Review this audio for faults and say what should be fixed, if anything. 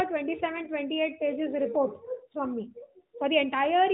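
Nothing in this speech needs fixing. It comes through the AMR narrowband mobile codec at 12.2 kbps, so nothing above 4 kHz is present and there is a light, slightly synthetic coding character typical of a mobile call.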